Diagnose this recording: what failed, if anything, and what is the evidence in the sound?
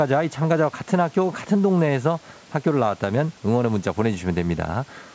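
Nothing in this speech recording stood out on listening as a failure at any stage: the low-frequency trim of the call's microphone processing and the content ending at about 8 kHz are normal for that path, and the room noise sitting roughly 30 dB below the speech belongs to the recording space rather than to the system.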